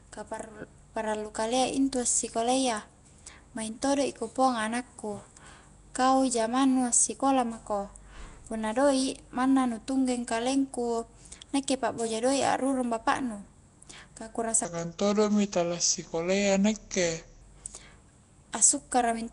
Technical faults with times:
0.00-19.33 Nellymoser compression
14.65-17.41 section at the wrong speed

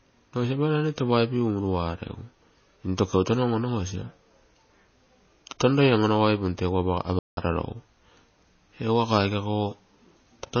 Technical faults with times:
0.00-10.60 MP3 compression
7.19-7.37 playback stall

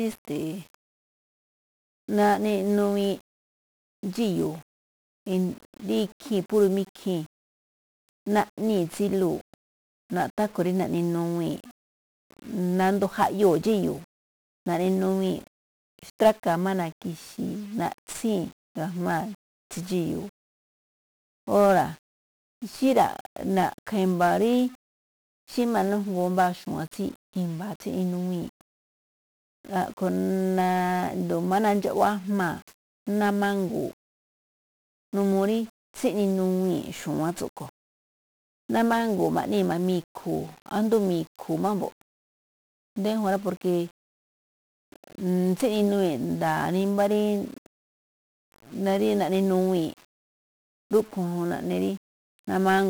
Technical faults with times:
0.00-52.90 1-bit DFPWM compression

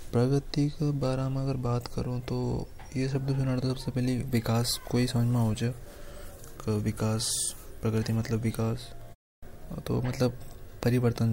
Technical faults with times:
none

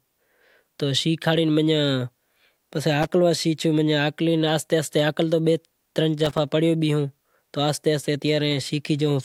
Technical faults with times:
3.02-3.10 loose connector crackle
6.25-6.50 loose connector crackle

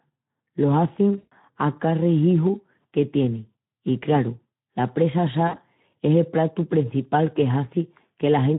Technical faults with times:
0.00-8.59 Speex codec
1.17-1.33 VoIP packet loss concealed by the speech codec
5.48-5.61 VoIP packet loss concealed by the speech codec

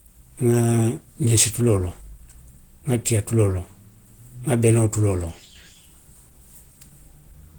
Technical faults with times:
0.00-7.59 Opus compression

